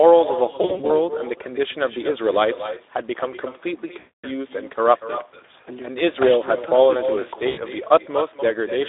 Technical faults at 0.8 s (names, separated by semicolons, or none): echo with no canceller; Speex codec; VoIP packet loss concealed by the speech codec